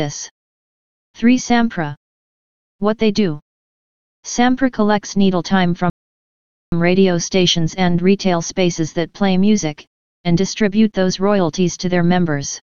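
At 5.9 s the audio stops dead and falls silent until 6.72 s. This is a rebuffering stall. The player used up the audio it had downloaded and had to wait for more data. The gap adds about 0.82 s of dead air. When playback returns, it picks up at the exact point where it broke off. Nothing is skipped or repeated. The timeline simply stretches by the length of the pause.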